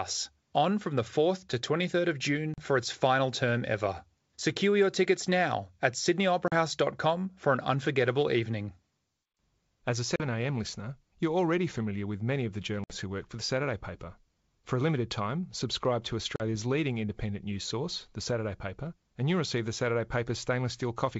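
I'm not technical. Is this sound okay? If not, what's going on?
No, this speech has packet loss on an ADPCM call: tiny silent gaps at 2.54, 6.48, 10.16, 12.84 and 16.36 s, where bits of the call went missing and the speech comes back briefly off-kilter.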